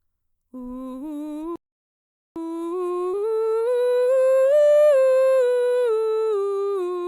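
Playback stall from 1.56 to 2.36 s: the music cuts to silence for 0.8 s, likely because the player ran out of data or its thread was blocked, then resumes.

Skip ahead at 3.13 to 3.15 s: about 0.4 s of music is dropped while later audio was already waiting, so the two sides join almost directly.

Jitter buffer speed-up from 3.23 to 4.83 s: short pitch-period pieces are repeatedly cut to shrink the buffer, so the music plays at 111% speed with unchanged pitch and an unsteady, hurried tempo, shedding about a fifth of a second.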